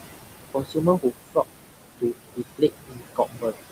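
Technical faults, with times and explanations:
Throughout: noise suppressor artifacts. The suppressor pulls bands it judges to be steady noise down by about 20 dB, frame by frame. The room noise, only about 8 dB under the speech, sinks in the gaps and rises beneath speech.
0.54–1.12 s and 2.58–3.64 s: speech cut by the noise suppressor. The suppressor took parts of the speech for noise and lowered them by up to about 18 dB and 21 dB, over roughly a third and half a second, so they sound swallowed.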